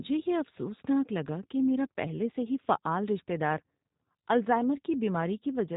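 Speech run through a G.729 codec the whole way: nothing above about 3.8 kHz, plainly rough, synthetic texture, which fits an 8 kbit/s VoIP path.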